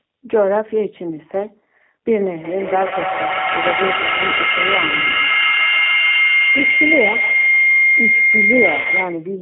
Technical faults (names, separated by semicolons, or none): G.729 codec; feedback howl; VoIP packet loss concealed by the speech codec